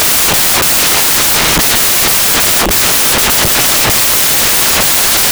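Samples built from the wrong bytes affect the whole of this speech recording, from start to finish. Each sample's bytes are assembled in the wrong order or alignment, so the rapidly fluctuating low-order bits become the dominant part of every value. The result is loud, harsh broadband noise, close to white on the louder sounds.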